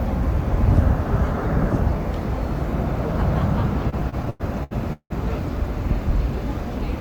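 From 3.89 to 5.12 s the audio suffers repeated stalls, a stutter. Packets arrived late, so the jitter buffer kept running dry. It stalls eight times, the longest about 174 ms. Each stall stretches the last sound. Nothing drops out, but it drags and stumbles.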